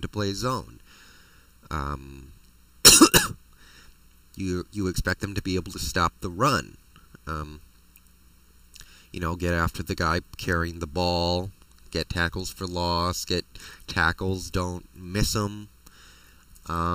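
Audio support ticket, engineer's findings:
Hollow, phasey sound across the whole clip, with a fixed notch around 700 Hz and more notches stacked evenly above it. This is channel delay (comb filtering): one channel arrives roughly 0.7 ms late, and folding to mono cancels the shared content at regular intervals. Check the channel alignment or latency compensation before the mono sum.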